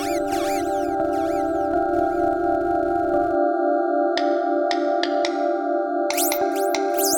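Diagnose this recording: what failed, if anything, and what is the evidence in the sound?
A filter restarted on every block is what failed, at the call-processing or buffer stage. Through the music, from 0.0 to 3.35 s, a regular buzz at 200 Hz tracks the signal's level. Each processing block begins from zeroed filter state, leaving a small onset transient at the block rate.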